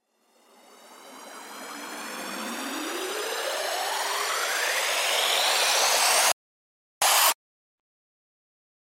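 At 6.32 s the sound just drops out to silence, and it stays quiet until 7.02 s, when it picks up again at exactly the spot where it left off. That's a rebuffering stall: the player ran through everything it had downloaded and had to sit and wait for more data before carrying on. Nothing goes missing across the gap, but the pause tacks roughly 0.7 s onto the clip's running time.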